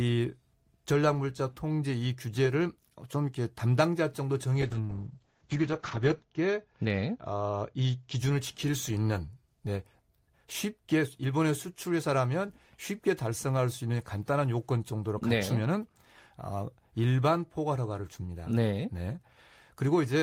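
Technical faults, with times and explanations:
4.62–8.25 s, call bitrate drop: the encoder got starved of bits, which points to roughly 8 kbps, so the speech codes coarser and loses everything above 8 kHz until the rate recovers.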